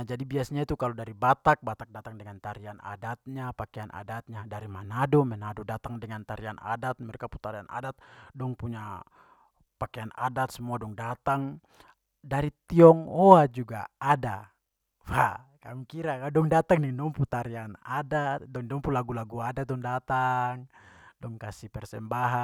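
Nothing in the recording stands out as a technical fault, so there's really nothing to point to here.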